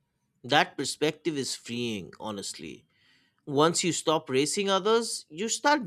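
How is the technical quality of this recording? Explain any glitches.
No technical faults are audible.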